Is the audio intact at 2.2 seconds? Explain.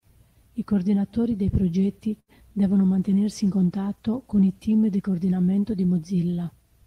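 No: a short stall from a late packet runs 2.19 to 2.30 s, stretching the last sound for 85 ms until delivery; unlike a dropout, nothing is lost.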